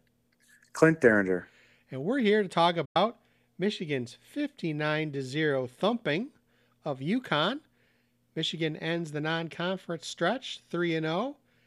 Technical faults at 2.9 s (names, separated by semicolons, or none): digital broadcast dropout